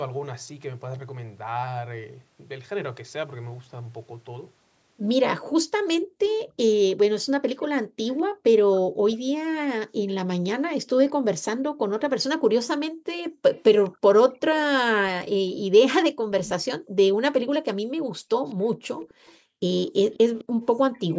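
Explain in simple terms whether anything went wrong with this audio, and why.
Two problems can be heard in this speech, both tied to someone on the call using a loudspeaker.

The first is an echo leak: a faint, delayed copy of the talking, arriving about 0.21 seconds behind the original. It shows up from 5.87 to 9.16 s, from 13.54 to 14.61 s, as a brief scrap at 16.5 s, and from 18.47 s to the end. This is likely because the far side's echo canceller didn't fully remove what its microphone picked up from its own loudspeaker, so that leftover was sent back.

The second is background gated by the echo canceller. While the loudspeaker was playing, the canceller turned the microphone down sharply, so the room sound dips almost to silence and then comes back. This happens briefly around 6.0 to 6.2 s, in stretches between 7.8 and 10.1 s and between 11.8 and 13.4 s, and for about a second and a half in total between 15.5 and 20.6 s.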